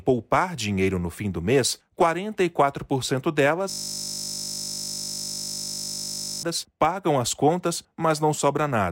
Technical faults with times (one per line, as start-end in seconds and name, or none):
3.70-6.43 system hang loop